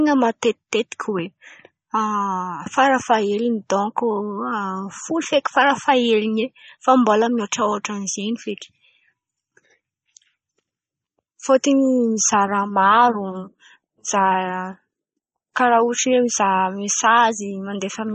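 From start to finish the speech has a hard ceiling at 8.4 kHz, with nothing above it, and a plainly audible watery, swirling texture as weak frequency components flicker in and out between frames. S sounds turn metallic and consonant onsets smear. The likely cause is MP3 compression at a starved bitrate, which fits a 32 kbps encode: the encoder cut the treble outright and dropped low-level detail to fit its bit budget.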